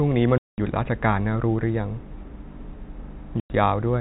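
Hard-edged dropouts cut the speech from 0.38 to 0.58 s and again from 3.4 to 3.5 s, each dropping to dead silence. This is packet loss filled with silence: lost stretches of 200 ms and 100 ms, consistent with 20 ms packets, replaced by nothing.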